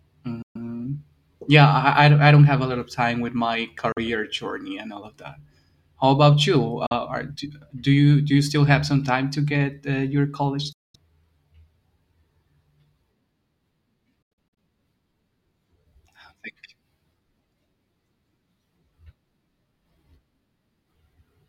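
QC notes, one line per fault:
0.42–0.56 s, 3.92–3.98 s, 6.86–6.92 s, 10.72–10.96 s, 14.22–14.57 s: Bluetooth dropout. The speech cuts to silence with abrupt or briefly faded edges, the second gap just before "journey and all of". It then resumes as if it had played on. The last gap breaks into several short holes. The likely cause is packets missing the headphones' deadline.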